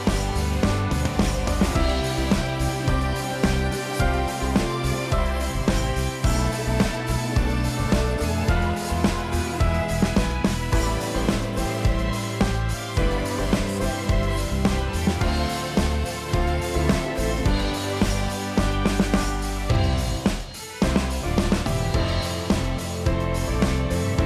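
No technical faults can be heard anywhere in the signal.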